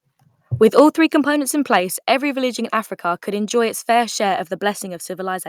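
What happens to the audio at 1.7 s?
Between 1.72 and 1.76 s, after "three components in", the peaks flatten into a harsh crackle. This is likely microphone overload, with input driven about 1 dB past the converter's limit. At 1.8 s, the whole sound drops about 3 dB in one step. The likely cause is the call software stepping the microphone volume down after the clipped peak.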